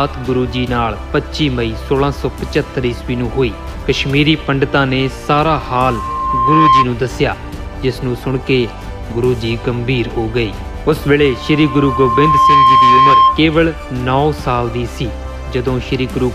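From 5.45 to 6.86 s and again from 11.18 to 13.44 s, loudspeaker feedback squeal swells up at 1 kHz over about a second and a half, peaking roughly 10 dB above the sound. The mic's pickup of its own speaker runs away at that frequency, drawing a bright horizontal line on a spectrogram and a ballooning waveform envelope.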